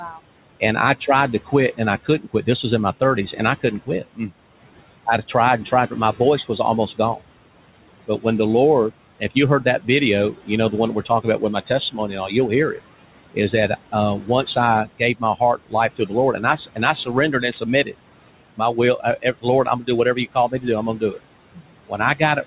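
Noise suppressor artifacts run through the whole speech clip: the suppressor pulls the room noise (about 17 dB below the speech) down by about 18 dB between phrases, then lets it back under the voice, so the residue pumps and flutters frame by frame. Speech cut by the noise suppressor occurs at 0.0–4.31 s, at 8.91–12.79 s just after "when the", at 13.34–17.95 s, and at 18.57–22.46 s. In these spans, quiet consonants and word endings were mistaken for noise and dropped by about 17–19 dB, under a second in total in the first span, about half a second in the second and about a second in the third, so they sound swallowed. The audio is band-limited with nothing above 4 kHz, which fits a G.711 mu-law call codec at 64 kbps.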